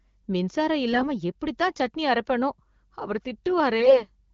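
AMR bit errors strike twice. From 0.92 to 1.08 s, just before "எப்படித்தான் சட்னி அரப்பேனோ அவர்", the weakly protected bits of the AMR-WB frames arrive flipped at a rate of several percent. The excitation pulses land in the wrong places and the pitch, gain and spectral values go astray, so the speech turns hoarse and gargly. From 3.80 to 4.05 s, after the same phrase, a heavier burst of roughly a tenth of the bits produces a scratchy rasp on top of the codec's light 12.65 kbit/s coloration.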